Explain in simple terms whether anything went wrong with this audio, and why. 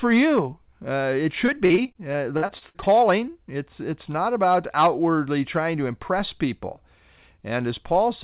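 Between 1.46 and 2.95 s the speech turns choppy and robotic. This is repeated packet loss. The call kept losing small chunks of sound, 13 times in that stretch. Each time, the system filled the hole by stretching out the last bit it had. The longest hole lasts about 53 ms. Roughly a quarter of that stretch is patched-over sound, and some pieces are simply missing. Throughout, the sound is telephone-like, with nothing above 4 kHz, as expected from this call path.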